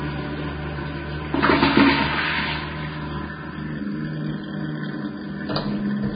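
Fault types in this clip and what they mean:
Vorbis compression: Nothing remains above 4.9 kHz, so the top end is missing. The upper band sounds hissy and grainy, with roughened tones and blurred attacks. The likely cause is heavy Vorbis coding near 16 kbps, where fine treble detail becomes noise.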